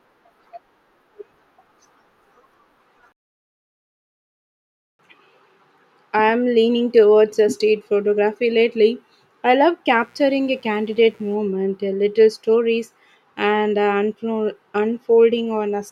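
From 9.88 to 11.38 s a mains buzz comes in under the speech, a steady, raspy edge built on 60 Hz harmonics stretching well up into the kilohertz range. Something like a dimmer or poor shielding is letting switching spikes in twice per cycle, sitting quietly underneath, roughly 40 dB down.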